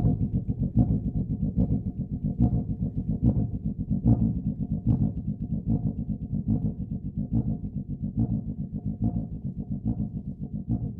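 Nothing here calls for a technical note: the audio carries on without a single fault worth pointing to.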